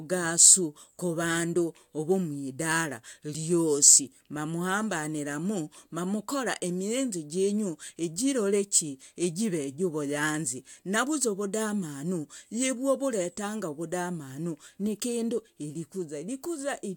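No technical faults turn up at any point in the recording.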